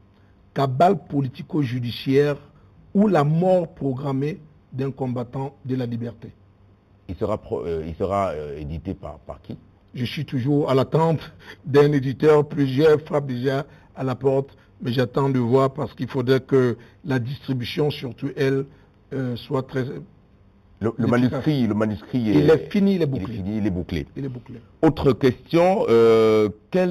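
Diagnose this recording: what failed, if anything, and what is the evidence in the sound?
The failure is at the sample-format conversion stage: imaging from linear upsampling, present for the whole clip. The content stops near 4 kHz, which fits an 8 kHz source raised to 44.1 kHz by straight-line interpolation. That crude filter dulls the top of the band and leaves a mirrored copy of the spectrum, folded about 4 kHz, from 4 kHz to 8 kHz. The copy sits roughly 30 dB down and is heard as a faint metallic shimmer. On a spectrogram, a faint inverted copy of the content appears directly above 4 kHz.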